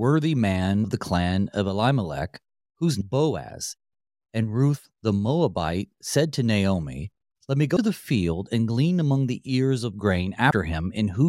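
Speech with compressed frames skipped at 0.84, 3.01, 7.76 and 10.5 s, jumping ahead roughly 0.3 s, half a second, then 0.1 s twice, which fits whole 26 ms frames being dropped. Each join appears as a brief smeared smudge where spectrogram formant tracks break off, not a sharp click.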